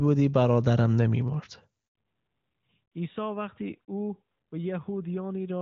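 At 1.87 s a handover gap cuts the speech for 80 ms, until 1.95 s, as the call switches networks and no frames arrive. The sound decays quickly into silence, and the waveform shows a short flat stretch while the spectrogram shows a blank vertical band.

From 1.95 s to the end, a fallback to narrowband takes over. The link drops from the HD Voice wideband codec to an older narrowband one, so the speech turns duller and rougher. On a spectrogram, energy that reached about 7 kHz before the gap now stops abruptly at 4 kHz, leaving an empty band above. The clarity before the switch points to a high wideband rate, around 23.85 kbit/s.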